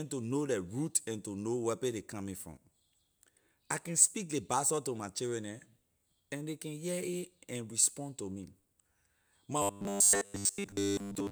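A speech clip in which, from 9.62 s to the end at 11.31 s, the voice collapses into a rigid, metallic buzz at 100 Hz, the robotic sound from repeated short buffers. Audio likely arrived too seldom, so a 10 ms block was looped for most of that stretch while real audio was skipped.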